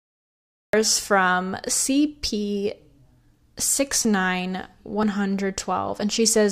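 From 0 to 0.73 s there is digital silence, then a cut-off start: speech begins mid-sound with no attack, showing as a flat line ending in a hard vertical edge.

Between 2.08 and 6.02 s, periodic USB or driver dropouts skip about 10 ms of audio roughly every 0.99 s, heard as about five regular ticks and visible as thin vertical seams.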